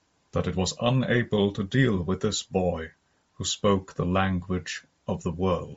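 From start to finish the speech carries a breathy, grainy edge and a dulled, hissy top end, plainly audible throughout. This is likely Bluetooth LC3 compression: upper bands zeroed and refilled with noise, consistent with about 32 kbps and 7.5 ms frames.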